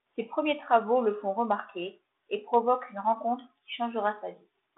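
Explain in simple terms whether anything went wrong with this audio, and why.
Nothing went wrong with this speech recording. It has the narrow sound of a phone line, because the G.726 ADPCM telephone coding it passed through keeps only the middle range of the sound and lets nothing above about 3.9 kHz through.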